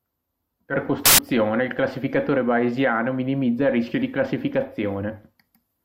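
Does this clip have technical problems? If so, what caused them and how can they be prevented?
Yes. From 1.06 to 1.19 s the speech is replaced by a burst of loud, harsh broadband noise. These are samples built from the wrong bytes: each sample's bytes were combined misaligned or in swapped order, so the noisy low bits became the dominant part of every value. Reading with the correct byte order and alignment prevents it.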